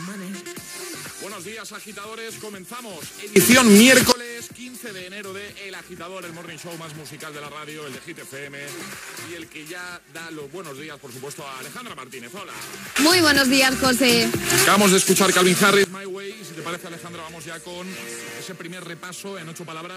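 Three times the level of the whole audio, background noise included, jumps abruptly: by about 23 dB from 3.36 to 4.12 s, about 19 dB from 12.96 to 15.84 s, and about 6 dB from 16.6 to 16.76 s. This is likely a sudden gain jump, with digital gain switched between samples without any ramp.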